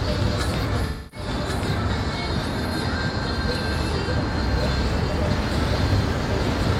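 A doubled audio track runs through the whole clip. A second full-band copy trails about one second behind, roughly 5 dB quieter. It has no reverb tail or room colour. The likely cause is a second, slower capture path mixing in.

AAC frame loss with concealment appears from 0.86 to 1.27 s. About 256 ms of audio went missing. The decoder rebuilt it from the last good spectrum. It sounds smeared and phasey, then thins toward silence before the sound fades back in.

A second AAC frame loss with concealment follows from 4.02 to 4.08 s. About 43 ms is lost, which fits a single AAC frame. The gap is patched from the previous spectrum and gives a brief noisy, smeared blip.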